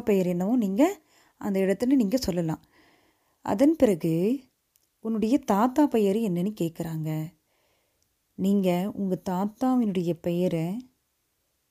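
Nothing goes wrong anywhere in this recording, so there's no fault to point to at any moment along the way.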